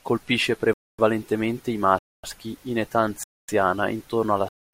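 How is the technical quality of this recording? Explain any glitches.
The speech is repeatedly interrupted by a gap between chunks: 250 ms silent holes at 0.74, 1.99 (before "in età"), 3.24 (before "intorno alla") and 4.49 s. Each one-second chunk plays intact, but silence is left at every join. The waveform shows flat, hard-edged blanks, and the spectrogram shows regular empty columns.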